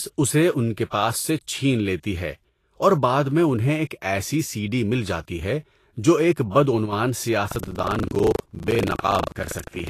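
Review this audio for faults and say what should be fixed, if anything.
The whole clip has a grainy, hissy top with nothing above 14.2 kHz, likely Vorbis compression at a low bitrate around 39 kbps. Encode at a higher bitrate or keep a lossless master.

One channel drops out at 2.49–2.76 s and 6.86–6.93 s. The level falls by about 6 dB each time, which points to one side of a matched stereo pair vanishing. Check cables and channel routing before the mono fold-down.

Buffer tearing runs from 7.48 s to the end. It makes a 25 Hz rattle because roughly a fifth of each buffer replays audio about 70 ms stale. Give the audio callback more headroom or larger buffers so the write and read positions never cross.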